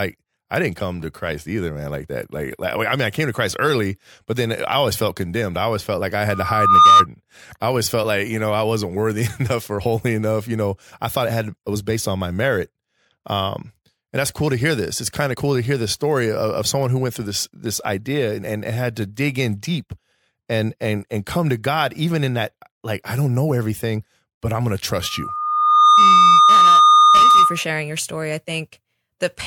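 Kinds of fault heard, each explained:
Loudspeaker feedback squeal: the microphone picks up its own loudspeaker, and at 1.2 kHz the loop gain exceeds one. That tone swells over the speech after "always felt like I" for about half a second, reaching about 15 dB above it. It returns near "everything but I'm gonna", building over roughly a second and peaking about 10 dB above the speech.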